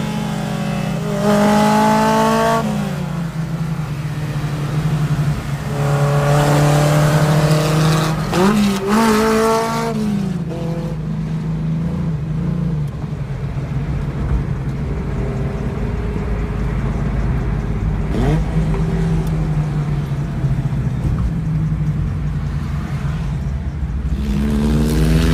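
No technical faults can be heard anywhere in the signal, which holds steady and intact throughout.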